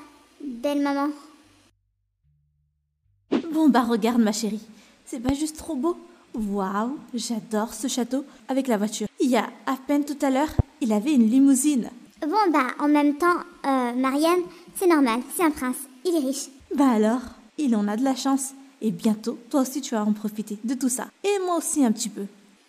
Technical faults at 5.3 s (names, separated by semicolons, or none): loud pop